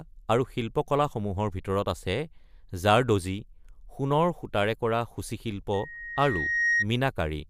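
From 5.73 to 6.86 s a loudspeaker feedback squeal swells over roughly a second into a 1.9 kHz tone about 5 dB above the speech, drawn as a bright horizontal spectrogram line.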